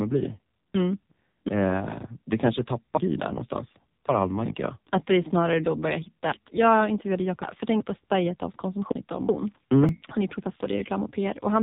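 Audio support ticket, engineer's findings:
AMR narrowband mobile codec, whole clip. Speech passed through a 2G/3G mobile link at a very low rate, consistent with roughly 5.9 kbps. Frames carry too few bits for the vocal-tract model, so the voice comes out buzzy and synthetic, with heavy codec damage. Band cut at 3.8 kHz: no sibilance or air above it.

Repeated buffer, 9.89 s. New audio missed its deadline, so playback looped the last tiny block twice more. The repeat length, about 1.45 ms, fits a 64-sample buffer. Heard as a brief click or buzz rather than a stutter, with no audio lost.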